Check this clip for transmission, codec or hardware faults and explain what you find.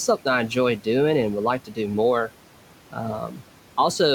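Two faults show up, both from the noise suppressor; the room noise underneath, about 19 dB below the speech, is part of the recording.

Noise suppressor artifacts run through the whole clip. The suppressor pulls down bands it judges to be steady noise by about 12 dB, frame by frame, so the background dips in pauses and swells under speech.

Speech cut by the noise suppressor occurs twice. At 1.65–1.78 s, right after "and would like", speech drops by up to about 12 dB; at 3.28–3.42 s, by about 7 dB. Each time the suppressor mistook quiet speech energy for noise, so consonants or endings sound swallowed.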